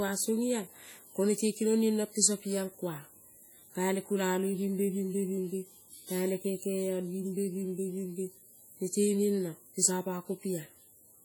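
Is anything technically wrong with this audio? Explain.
Yes. Throughout the speech there is heavy transform-codec damage, likely from WMA compression at a low bitrate around 32 kbps. Long transform blocks spread quantisation noise over tens of milliseconds and weak spectral lines are zeroed, so the audio rings and sounds washy, with hiss that breathes with the signal.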